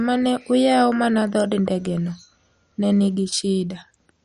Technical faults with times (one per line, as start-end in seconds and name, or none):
0.00-4.24 MP2 compression